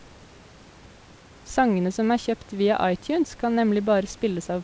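No technical faults can be heard anywhere in the speech. The call path's band limit shows as an absence of content above 8 kHz, which fits a wideband codec such as G.722, and the room noise sits about 29 dB below the speech.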